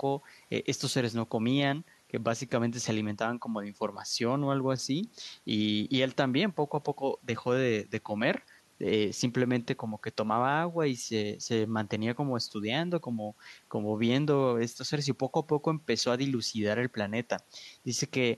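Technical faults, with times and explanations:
Listening to the speech, nothing stood out as a technical problem at any point.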